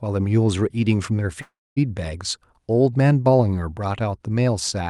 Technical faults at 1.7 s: call audio freeze

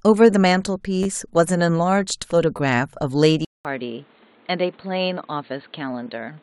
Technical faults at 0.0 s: none

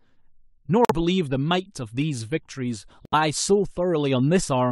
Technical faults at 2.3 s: none

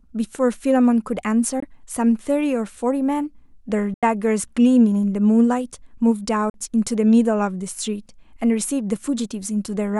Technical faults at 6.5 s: Bluetooth dropout

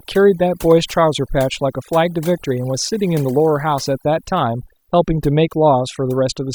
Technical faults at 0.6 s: overdone noise removal

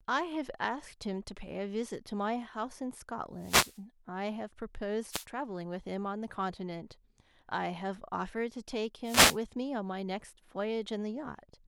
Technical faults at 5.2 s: wireless microphone noise hit

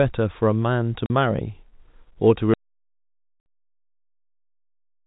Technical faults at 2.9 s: audio dropout to silence

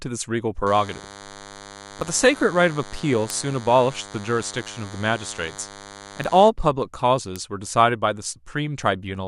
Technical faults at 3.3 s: DECT cordless phone buzz; bit error spike

